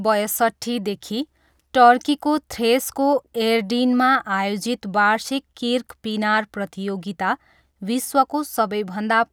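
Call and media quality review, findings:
Nothing to flag on this speech recording; no audible issues anywhere, so the ticket can be closed out.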